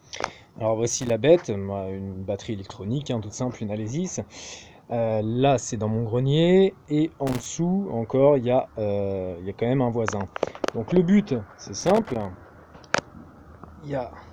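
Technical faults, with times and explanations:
0.90–1.12 s, 7.27–7.46 s, 11.80–12.25 s: loose connector crackle. A worn contact intermittently breaks the signal path, chopping the sound into irregular scratchy bursts with clicks. The waveform shows jagged dropouts and spikes, and the spectrogram shows broadband vertical streaks scattered across each burst.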